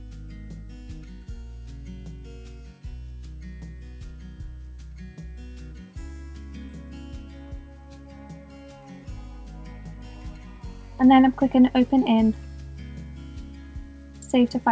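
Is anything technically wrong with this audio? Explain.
Yes. Around 6.66 to 6.70 s there is a short concealed packet loss. About 20 ms of the stream didn't arrive at the decoder in time, so the receiver filled the gap with roughly 21 ms of synthesized continuation, extending the preceding sound and then crossfading back into the real audio. The result is a brief smear or wobble at that point. The audio also stops at 8 kHz, which fits a wideband call codec such as G.722.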